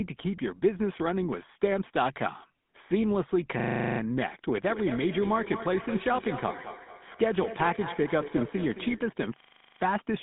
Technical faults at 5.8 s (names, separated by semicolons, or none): GSM full-rate codec; feedback echo between two devices